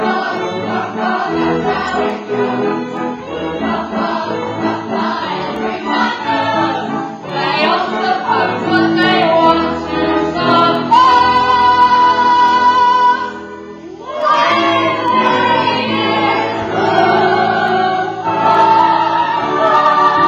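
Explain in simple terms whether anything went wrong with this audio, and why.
A sharp tick of uneven strength repeats about once a second, roughly twenty in all, from 0.37 s to 19.4 s. These are word clock ticks: the receiving device ran on its own clock, slightly off the sender's, so each time they drifted apart one sample was dropped or repeated.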